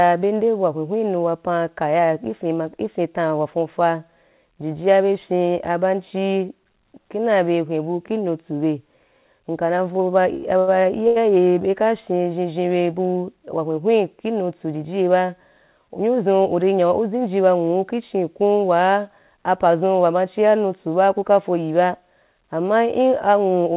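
Right after "nka na vou ba" there are two short stalls from a late packet, at 10.36 s and 10.59 s, and a third at 11.07 s just before "be ka fyen zhen". Each time a packet showed up late, the jitter buffer ran dry, and the receiver stretched the last bit of sound for about 74 to 81 ms until the packet arrived. Nothing is lost; the sound just hangs a beat too long with a faint buzz or dip. All of it sits on a narrowband call path with nothing above 4 kHz.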